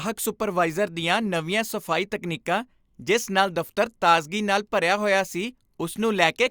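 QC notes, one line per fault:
Nothing stood out on listening to the speech in this clip.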